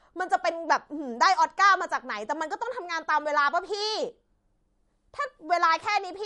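A speech clip with MP3 compression damage from start to finish. Nothing is heard above about 11.1 kHz, so the treble stops at a hard ceiling. The damage is plainly audible. Sibilants turn metallic and chirpy, and the sound has a watery, swirling texture. Quiet frequency detail flickers in and out between frames. Consonant onsets are smeared. The likely cause is an encoder starved of bits, which fits a low bitrate near 48 kbps.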